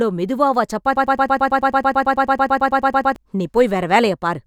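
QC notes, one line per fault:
0.96–3.16 s: broken-record loop, a 110 ms fragment of the speech repeats exactly 20 times back to back, likely a stalled player or stream resending its last buffer, so the intervening speech is lost.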